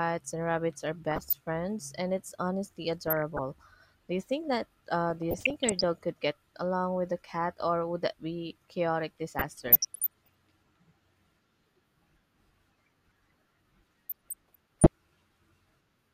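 Muddy, bubbling chirps and squelches break over the speech at 1.11–1.35 s (after "and rabbits are"), 3.03–3.39 s, 5.10–5.84 s (before "could get along with"), 9.39–10.29 s and 14.09–14.87 s. This is DAB burbling. Weak reception lets bit errors, at a rate of a fraction of a percent, slip past error correction and corrupt MP2 samples and scale factors, so single sub-bands jump in level.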